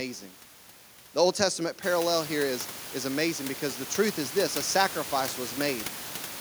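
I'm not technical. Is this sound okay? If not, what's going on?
Yes, nothing in this recording points to a problem with the equipment or the recording system. From about 2 seconds in, the background noise of the room gets noticeably louder, but it stays well beneath the speech and comes from the room itself.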